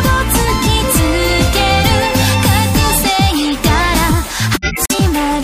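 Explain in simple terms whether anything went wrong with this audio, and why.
Yes, there are two kinds of trouble. At 2.18 to 2.26 s there is a short squeaky blip, and at 3.29 to 3.56 s a longer burst of chirping noise. These are corrupt frame decoded errors. The audio was stored as small compressed chunks called frames, and some of their data got scrambled. The player played them anyway, so the sound came out at the wrong pitches. The first blip spans a couple of frames and the second spans several.

From 4.53 to 4.95 s the sound suddenly cuts to complete silence for about four tenths of a second, then carries on. This is a corrupt frame muted error. Here the player spotted the damaged chunks and refused to play them, leaving a gap in their place. The length of the hole points to a run of about eight frames. The timing afterwards stays in step because nothing was skipped.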